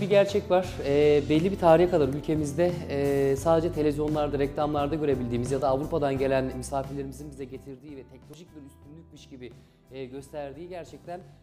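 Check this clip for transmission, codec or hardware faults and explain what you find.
One codec fault turns up. At 8.34 s, damaged data in the compressed stream makes the decoder misread a frame and lose sync, leaving a brief glitch.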